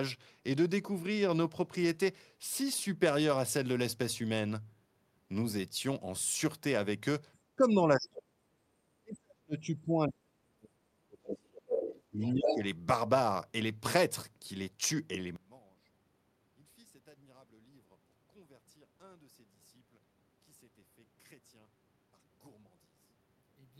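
Speech, with three kinds of fault. Speech suppressed in double talk at 7.56–8.37 s, 9.0–11.67 s and 12.11–12.63 s dips the talker by up to roughly 40 dB, likely an echo canceller ducking both sides. On the waveform these show as deep notches, and on the spectrogram as gaps. The other side's voice leaking through at 11.28–11.38 s, 11.68–12.01 s, 12.23–12.29 s and 12.45–12.64 s comes in scraps, the last near speech level, likely residual loudspeaker echo. It appears as separate harmonic traces. From 15.36 s to the end, one channel inverted drops the mono sum by about 29 dB, likely reversed polarity. The waveform flattens and the spectrogram fades.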